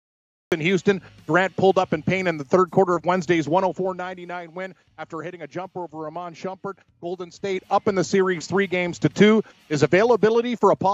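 The clip opens with a cut-off start. Digital silence runs from 0 to 0.52 s. At 0.52 s the sound appears all at once, already in progress. There is no attack and no fade-in. The capture or stream began late, so whatever came before was never recorded. The jump from silence to full signal is abrupt. It lands as a hard edge at that point.

Zipper noise appears from 3.54 to 4.34 s. The level drops by about 10 dB. It does not glide. It falls in many tiny steps, about 50 per second. That rate suggests one gain update per processing buffer, with no smoothing between them. Each step puts a small discontinuity in the waveform. Together they make a fine ticking that rides on the sound while it fades.

Zipper noise returns from 7.3 to 7.68 s. This time the level rises by about 10 dB, in 1 dB steps at about 50 per second. The steps are coarser, so each tick is more distinct. It sounds like a brief, grainy zip during the rise.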